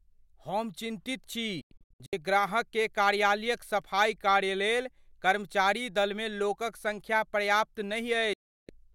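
At 1.61 s the speech breaks up in a digital broadcast dropout. The receiver mutes failed frames, leaving several short holes over about 0.51 s, the longest 96 ms. At 8.33 s it mutes again, a 0.35 s silence. Each cut fades in about 3 ms, and the lost audio never returns.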